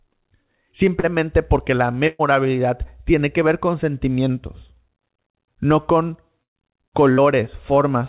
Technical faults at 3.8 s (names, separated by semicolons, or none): none